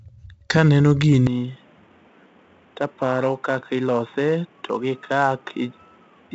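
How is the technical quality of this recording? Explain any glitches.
Technical quality is poor: the speech carries heavy coding noise from start to finish, and the sound degrades again partway through.

Throughout, 4-bit ADPCM compression adds a gritty hiss that rises and falls with the speech, with roughness on sharp attacks where the adaptive step size lags behind. Nothing reaches above 7.7 kHz, and the damage is consistent with a 64 kbps stream.

From 1.27 s to the end, the band narrows to nothing above 3.8 kHz, the level drops a few dB, and a new noise floor sits roughly 30 dB under the speech. The sound turns boxy without any gap, most likely because the input switched to a poorer device.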